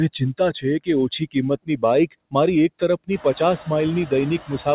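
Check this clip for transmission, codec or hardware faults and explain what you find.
Two faults stand out in this speech clip, both from the noise suppressor.

Noise suppressor artifacts run throughout. The background drops away in pauses by about 20 dB and swells back under the talking. The suppressor estimates steady noise per frequency band and attenuates those bands frame by frame. This pumping becomes easier to hear once the room noise rises around 3 s, settling about 16 dB below the speech.

Speech cut by the noise suppressor occurs from 1.66 to 1.83 s, just before "બાઈક મારી એક". Roughly a tenth of a second of speech sounds swallowed, dipping by up to about 17 dB. The suppressor misjudged that quiet stretch as noise and turned it down along with the background.

The audio also has nothing above 4 kHz, which fits a narrowband 64 kbps G.711 call path.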